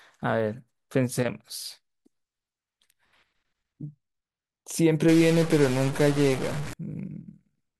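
From 5.08 to 6.74 s the speech turns harsh and buzzy. A stuck bit is the likely cause. One data bit is held fixed, so about half the samples are pushed off by a step of about -30 dBFS. Quiet gaps fill with a gritty noise.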